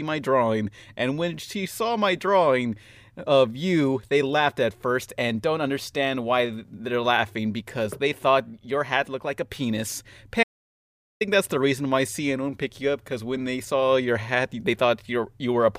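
Right after "looked like a penis", at 10.43 s, the speech drops out to silence and stays dead until 11.21 s, when it picks up again at "that's the reason why". That's an audio dropout to silence, roughly three quarters of a second long. The gap is silent with no room tone underneath, so the signal feeding the recorder was likely lost for a moment while it kept writing empty samples. Whatever was said in that stretch is simply gone.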